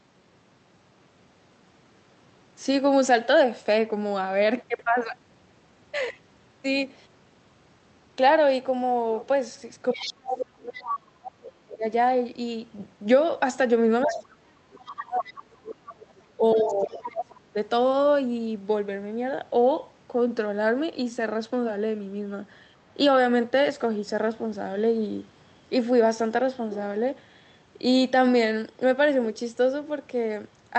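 At 9.93 s a second voice appears under the speech, about 10 dB below it, and lasts until 10.96 s. This is the other side's voice leaking through: the far end's audio, played on the talker's loudspeaker and picked up by the microphone, was likely not fully removed by the echo canceller. From 9.93 to 11.84 s the main speech also sinks, at its deepest by something like 30 dB. This is speech suppressed in double talk: with both sides talking, the canceller likely turned everything down rather than separate the two.

The same pairing returns from 14.03 to 17.56 s. The speech is pulled down again, for roughly three seconds in total, while scraps of the other voice come through at 14.06 to 14.25 s (about 10 dB below the speech), 14.86 to 15.33 s and 15.91 to 17.07 s (both about 15 dB below).

The leak can be told apart from a stray background talker because it appears only while the speech is being suppressed. 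The suppression is a deep ducking rather than the abrupt, millisecond gaps of packet loss, and it is tied to the other voice's presence. The codec's upper band limit, near 8 kHz, stays steady throughout.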